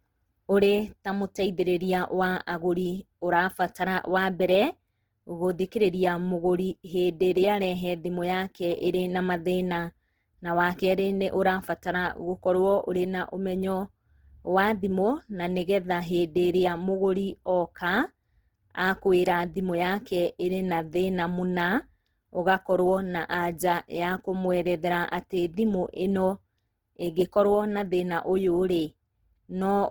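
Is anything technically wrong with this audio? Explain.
Yes. Throughout, the speech carries Opus compression artefacts, likely from a very low bitrate near 16 kbps. Starved bands get filled with folded or noisy content, so the speech sounds rough and grainy.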